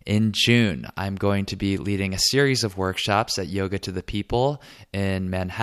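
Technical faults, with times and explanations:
No technical faults are audible anywhere in this speech recording.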